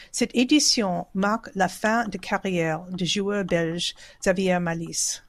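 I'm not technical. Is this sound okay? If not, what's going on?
No. At 4.23 s, just after "carrière du joueur belge", the speech briefly hiccups: a tiny slice goes missing. This is compressed frames skipped. The file stores the audio in small chunks of about 26.1 ms each, and here roughly one chunk was lost or rejected as damaged, so playback jumps ahead by around a thirtieth of a second.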